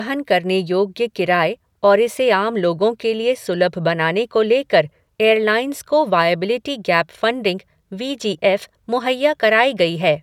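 No technical faults can be heard anywhere in the recording. Nothing interrupts or alters the speech at any point, so there is nothing to mark on the timeline.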